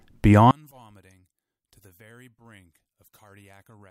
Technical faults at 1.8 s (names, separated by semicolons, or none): one channel inverted